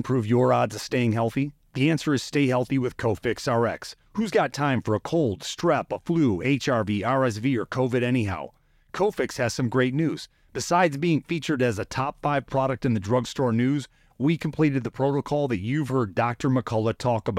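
No technical faults are audible anywhere in this recording.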